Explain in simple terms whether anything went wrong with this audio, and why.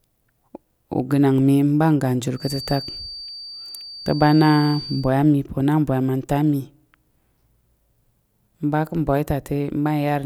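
A loudspeaker was likely picking up its own output through the microphone, with the loop sitting just at the edge of feedback, so one high pitch kept circling without growing into a howl. The result is a feedback whistle from 2.33 to 5.12 s: a thin, steady tone at about 4.6 kHz, fairly quiet and well below the speech, slowly swelling and fading in loudness as it hangs behind the talking.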